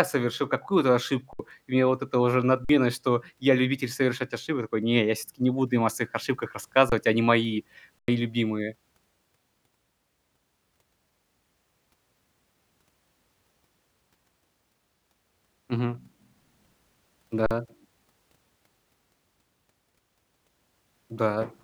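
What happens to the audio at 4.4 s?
Nothing goes wrong at 4.4 s: the speech continues cleanly through that moment with no dropout, click, distortion or other audible fault.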